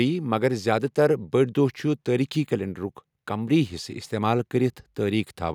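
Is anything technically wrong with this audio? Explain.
No, nothing is technically wrong with this audio.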